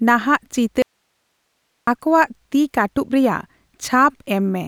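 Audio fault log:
0.82–1.87 s, audio dropout to a faint residue: the speech cuts out abruptly for about 1.05 s, leaving only hiss roughly 50 dB below the signal, then snaps back at "ᱟᱠᱚᱣᱟᱜ ᱛᱤ ᱠᱟᱹᱴᱩᱵ ᱨᱮᱭᱟᱜ". Likely the source feed broke while the path after it stayed live, so its noise floor carried through.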